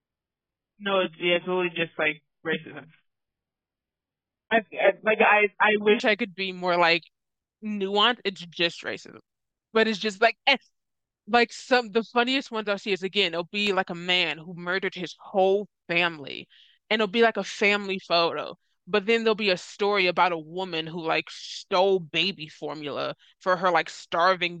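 Adaptive stream starting at a low bitrate, from 0.0 to 6.0 s: the player opens on a thin, low-quality version of the stream so playback can begin quickly, then switches to a better one once it has gauged the connection. For those first six seconds the speech has nothing above about 3.6 kHz and carries heavier codec smearing, which points to a very low starting bitrate near 8 kbit/s. At 6.0 s the treble and clarity return abruptly, with no gap, consistent with a step up to around 96 kbit/s.

CD scratch ticks, between 13.38 and 13.67 s: a scratch or blemish on the disc wipes out more data than the error correction can rebuild, and it passes under the laser once per revolution. The player then interpolates or mutes the damaged samples. Here that produces three small, regularly spaced ticks within about a third of a second, each lasting well under a millisecond.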